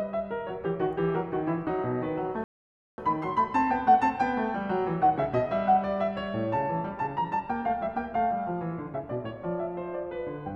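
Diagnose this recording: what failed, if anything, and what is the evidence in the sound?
A rebuffering stall at the playback stage interrupts the music at 2.44 s. It falls silent until 2.98 s, adding 0.54 s, then resumes exactly where it stopped. Nothing is skipped, which distinguishes a starved player waiting for data from a packet-loss dropout.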